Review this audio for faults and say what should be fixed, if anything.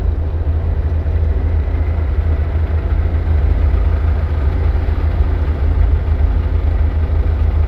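Imaging from linear upsampling runs through the whole clip. The audio was raised from a 16 kHz rate to 44.1 kHz by joining samples with straight lines, which filters poorly. The top of the original band, just below 8 kHz, is dulled, and a faint mirrored copy of the spectrum sits between 8 and 16 kHz at about 55 dB below the signal, adding a light metallic shimmer to high-pitched sounds. On a spectrogram it shows as a weak, flipped reflection of the lower band above 8 kHz. Use a proper band-limited resampler with a steep anti-imaging low-pass filter instead of linear interpolation.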